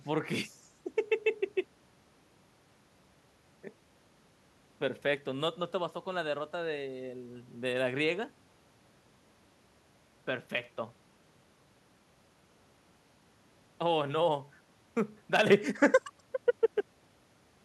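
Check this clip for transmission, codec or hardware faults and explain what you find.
There's one fault here, a sudden gain jump near the end of the speech. At 15.47 s the level steps up by about 6 dB in one go and stays there to the end of the clip. The speech and the background noise rise together, so it isn't someone leaning toward the mic. It's the whole signal getting louder. The likely cause is a digital gain change applied between two samples without any ramp, such as a level setting or bit shift switching over instantly.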